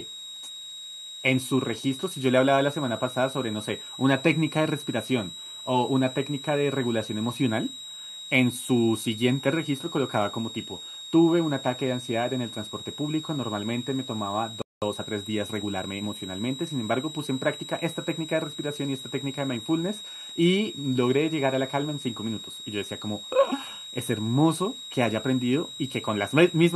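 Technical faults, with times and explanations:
throughout: switching supply whistle. A thin, high whistle sits under the speech for the whole clip, roughly 15 dB below it. Its pitch is near 4 kHz and wanders between 3.76 and 3.85 kHz instead of holding still. A power converter ticking in burst mode makes this kind of sound. The drifting pitch is what sets it apart from a fixed electrical hum or a steady test tone leaking into the path.
14.62–14.82 s: playback stall. The speech cuts off mid-flow into silence for 0.2 s, then carries on. This is much longer than a brief dropout click, and the audio resumes as a clean continuation rather than with a scrape or repeated fragment. The player likely ran short of buffered data or had its audio thread held up, so it had nothing to output until it caught up.
14.82–16.14 s: time-compressed catch-up. Right after the gap, the speech runs about 1.15 times faster for roughly 1.3 s, then settles back to normal pace. 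The pitch stays where it was. That combination marks it as a player trimming tiny slices and cross-fading the joins to recover lost time. A simple faster playback rate would instead raise the pitch.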